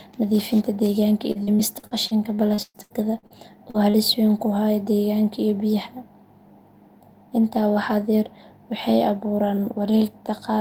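Right after "nadiifinta deegaanka", from 1.31 to 3.33 s, the speech turns choppy, with a robotic, stuttering quality and pieces missing. This is repeated packet loss (robotic sound). About a dozen holes hit this stretch, totalling about 600 ms, the longest about 122 ms. Each was patched by extending the preceding sound before the next hole arrived, so about 29% of the span is synthetic fill rather than real audio.

Two brief smears follow, at 3.70 to 3.77 s and 3.90 to 3.97 s. The second sits just before "weyn ku haya deegaanka". Each is a short concealed packet loss of about 40 ms. The decoder bridged the missing audio by carrying the last sound forward, extending the pitch of voiced sound or shaping noise for unvoiced sound, then blended back in. The result is a short wobble, and a brief consonant can drop out.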